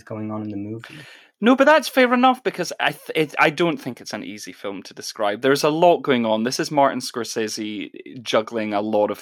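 No technical faults can be heard anywhere in this speech recording; the signal stays intact and stable throughout.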